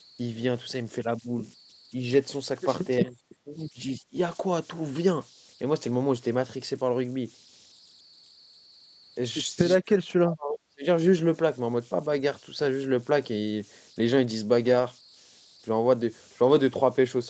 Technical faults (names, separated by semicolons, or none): converter idle tones; lost packet rebuilt from error correction; speech suppressed in double talk; background gated by the echo canceller